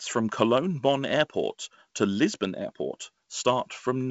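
No technical faults are present.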